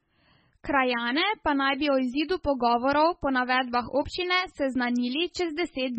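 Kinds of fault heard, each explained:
MP3 compression: throughout, the treble ends at 8.3 kHz and weak frequency lines flicker heavily and wash watery, likely from an encoder starved at around 16 kbps.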